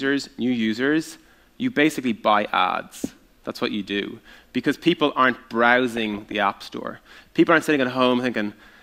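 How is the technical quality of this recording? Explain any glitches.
There is one glitch, DAB burbling from 5.97 to 6.34 s. Bit errors of around half a percent escaped correction and corrupted MP2 samples and scale factors, which points to roughly seventeen damaged frames. Wrong samples put short blips of noise into single sub-bands, and wrong scale factors make sub-bands jump in level, over the sound.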